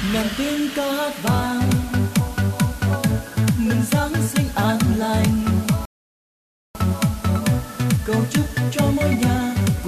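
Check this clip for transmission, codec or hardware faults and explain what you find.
Two faults are present: a steady hiss across the whole clip from low bit depth with dither, and one rebuffering stall near the six-second mark.

Throughout, an even, constant hiss sits roughly 20 dB below the sound, with no harshness or grit. That points to low bit depth with dither: the audio is held at about 6 bits, and noise added before rounding turns the coarse quantisation error into smooth, signal-independent white noise.

From 5.85 s to 6.75 s, the audio drops to complete silence and then picks up exactly where it left off. This is a rebuffering stall: playback ran dry and waited for more data. Nothing is skipped, but about 0.9 s of dead air is inserted.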